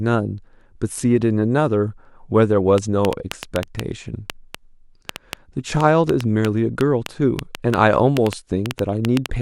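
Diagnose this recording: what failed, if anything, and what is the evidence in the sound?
A train of clicks runs from 2.78 s to 9.27 s: sharp, similar-shaped ticks at about 4.6 per second, unevenly spaced, some thirty in all, standing well above the speech and clearly audible in the pauses too. Because the clicks sit on top of the audio rather than cutting it out, the likely cause is pulsed interference picked up in the analogue wiring, though a faulty connection or power supply would sound much the same.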